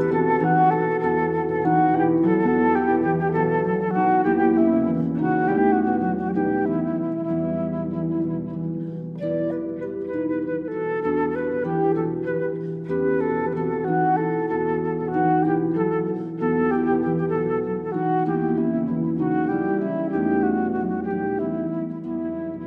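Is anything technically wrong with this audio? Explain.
Yes, there's damaged data in a compressed stream, three short hits at 2.42 to 2.48 s, 5.53 to 5.58 s and 13.42 to 13.49 s, each around 60 ms. In those spots the compressed bytes are corrupted, so the decoder misreads the frames, loses its lock on the stream and has to hunt for the next valid frame header before playing cleanly again. You hear each one as a brief chirp, squawk, click or short hole cutting into the sound.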